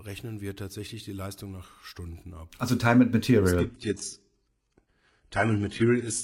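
At 3.59 s the speech quality drops suddenly, with no gap. An adaptive stream at a lower bitrate has taken over because the connection slowed. Nothing remains above 11.1 kHz, so the top of the treble is gone. The sound fits a very low-bitrate HE-AAC stream. This lasts to the end.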